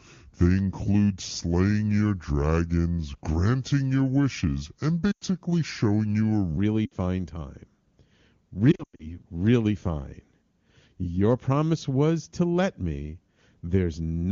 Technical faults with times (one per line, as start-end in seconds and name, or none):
0.00-6.57 section at the wrong speed
5.11-5.24 lost AMR speech frames
6.85-6.94 lost AMR speech frames
8.71-9.17 lost AMR speech frames